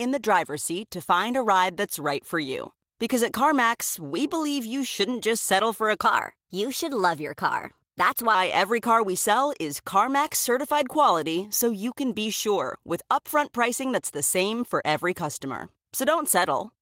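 From 6.05 s to 8.35 s, a section at the wrong speed runs about 1.13 times faster than the surrounding speech, so pitch rises by roughly two semitones along with the tempo and the delivery sounds high and hurried. Because speed and pitch move as one, this is a resampling fault rather than time-stretching, likely from that stretch being played back against a mismatched clock. Normal speed returns just before "every car we sell".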